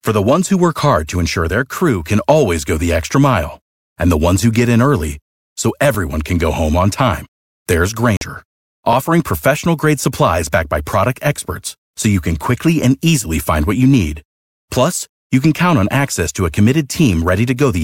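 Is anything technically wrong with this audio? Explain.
Yes, there is a Bluetooth stall at 8.17 to 8.21 s. Radio interference likely delayed the packets, so the headphones' buffer ran empty and playback paused until the resent data arrived. The speech drops to 45 ms of silence, then carries on.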